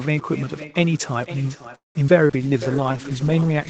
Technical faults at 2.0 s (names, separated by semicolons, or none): low bit depth without dither; echo with no canceller; call audio freeze; short concealed packet loss